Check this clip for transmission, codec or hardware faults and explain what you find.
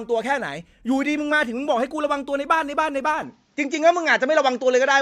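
One fault appears, near the end of the speech. At 3.22 s the sound changes abruptly and stays changed to the end. There is no gap at the change. From that point nothing is heard above 7.6 kHz, so the top end turns dull. The level also shifts by around 5 dB, and a faint new noise floor appears far below the voice. This is likely an input switched to a poorer device, whose narrower band, different gain and own background noise replace the original microphone's.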